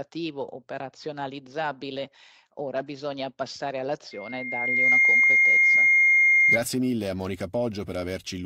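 A microphone in this speech recording was picking up the loudspeaker it was feeding, and at one frequency the loop's gain passed unity, producing loudspeaker feedback squeal from 4.11 s to 6.58 s. A single tone near 2.1 kHz emerges and swells over roughly three quarters of a second until it sits about 15 dB above the speech, a piercing whistle that continues until it stops at 6.58 s.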